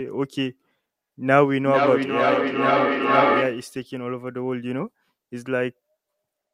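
From 1.62 to 3.82 s there's feedback echo between two devices: speech loops back about every half second, building to about 1 dB above the original.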